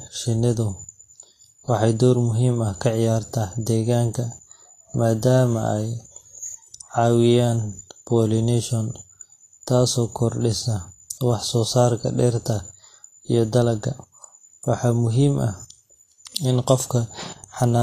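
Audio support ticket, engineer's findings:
Vorbis compression, throughout the clip. Treble hissy and grainy, consonant attacks smeared, speech tone roughened. Nothing above 14.2 kHz. Likely component: low-bitrate Vorbis encoder, damage level fits a rate around 31 kbps. Mechanism: lowered cut-off, upper bands quantised so coarsely that fine detail becomes noise of similar energy.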